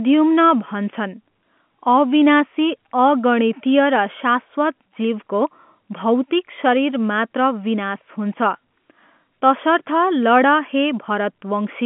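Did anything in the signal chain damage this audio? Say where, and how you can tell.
No, nothing in the chain damaged it.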